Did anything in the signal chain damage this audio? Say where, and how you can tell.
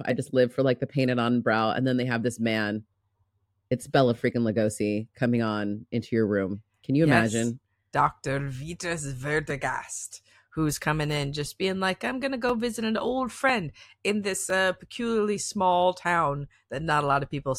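Yes. The damage is at the driver or buffer stage: periodic USB or driver dropouts. Just after "dr vitas", from 9.50 s to 14.50 s, there are about seven small ticks in the speech, spaced almost exactly 1.00 s apart. They stop before "uh peculiarly small town". Each one is a skip of a couple of milliseconds, with no silence inserted. Something is stalling the USB bus or audio driver on a fixed one-second cycle, and samples are lost each time.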